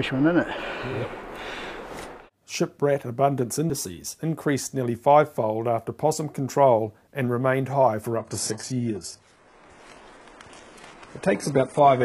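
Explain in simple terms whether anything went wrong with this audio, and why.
At 8.16 s the sound suddenly gets duller and stays that way to the end. This is an adaptive stream at a lower bitrate. The connection slowed, so a lower-quality version played. Everything above 11.5 kHz disappears. There is no gap.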